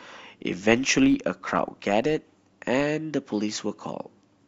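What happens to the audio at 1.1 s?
At 1.1 s you're inside a stretch of filter restarted on every block that runs from the start of the clip to about 2.93 s. The filter throws away its memory at each block boundary and starts again from silence, so every block opens with a small click. Those clicks repeat 50 times a second, which fits blocks of about 20 ms, and they merge into a low buzz riding under the speech that gets louder and softer with its level.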